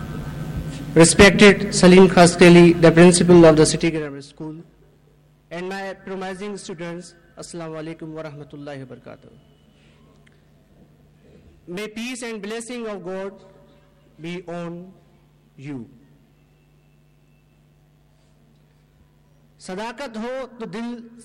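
Unsmoothed 1 dB gain steps, around fifty a second, cut about 20 dB from 3.69 to 4.16 s, producing zipper noise: rapid ticking over the drop.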